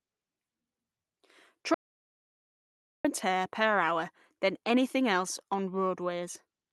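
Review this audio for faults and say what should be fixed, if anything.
An audio dropout to silence runs from 1.74 to 3.05 s, just before "and tear per hour". About 1.3 s of speech is lost to silence, with no room tone. The likely cause is a lost input link or stray mute while recording continued. Fix by monitoring input continuity and locking the mute and connections during capture.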